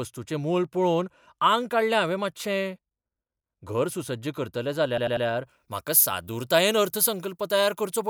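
Repeated frames at 4.98 to 5.26 s, just after "घर सुसज्ज करतलें": a 96 ms block of compressed speech is played again three times, adding 288 ms and producing an audible stutter.

Pre-emphasis left on from 5.47 s to the end: the treble boost was never undone, leaving 10 kHz about 14 dB above 1 kHz. This fits a 75 µs FM curve and makes the speech thin and sibilant.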